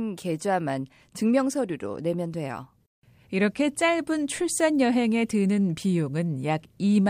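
From 0.13 to 7.08 s, clock slip clicks: a soft rattle every 40 ms or so, likely free-running clocks; strictly regular, unlike random crackle.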